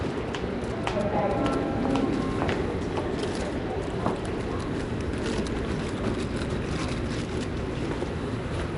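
From start to finish the whole thing carries a rough, grainy hiss clinging to the sound, a smeared, watery blur, and nothing above about 10.6 kHz. That's plainly audible Nellymoser compression damage, likely from Flash-era Nellymoser Asao coding around 44 kbps, starving weak bands and filling them with noise.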